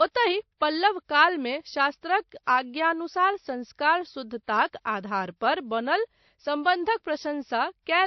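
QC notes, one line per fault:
Throughout: transcoding between lossy codecs. Nothing above 6 kHz, plus artefacts from two different codecs heard together, which fits a low-bitrate MP3 around 32 kbit/s likely re-encoded to WMA around 96 kbit/s. The later pass can't restore the lost top end.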